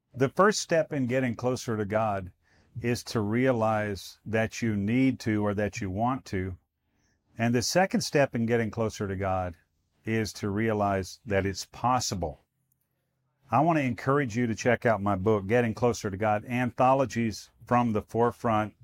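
Nothing technically wrong turns up anywhere in this speech recording, so there's no fault to point to and no time or cause to give.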